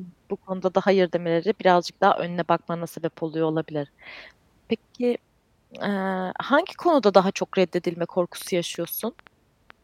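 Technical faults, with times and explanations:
8.42–9.71 s, train of clicks: just after "konuda daha çok reddedilme", a run of about seven short, similar clicks ticks over the speech at an uneven pace, averaging roughly 5.4 per second. The pulses peak at about the same level as the speech itself. The cause is likely an intermittent disturbance, such as interference from nearby equipment or a faulty connection or power supply, injecting repeated pulses into the signal.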